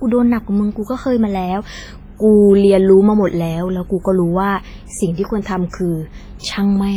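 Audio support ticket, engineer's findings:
Speech, whole clip: ringing, washy smear; hiss swelling and fading with the signal; weak detail missing. Likely WMA compression, heavy. Long transform blocks spread quantisation noise over tens of milliseconds; weak spectral lines zeroed. Smearing level fits a low bitrate, around 24 kbps.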